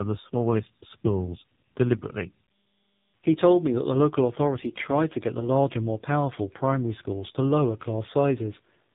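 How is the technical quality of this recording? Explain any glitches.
The quality is poor throughout, with one fault running the full length. Tandem speech coding affects the speech from start to finish. The audio passed through two low-rate speech codecs in series, apparently a GSM-style coder followed by an AMR-NB coder at a low rate, with a plain telephone link between them. Each coder re-encodes the previous one's already damaged output, so the errors stack. The result sounds rough and warbly, and muffled, with nothing above 3.8 kHz.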